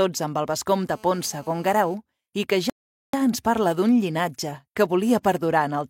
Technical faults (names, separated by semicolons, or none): GSM phone buzz; rebuffering stall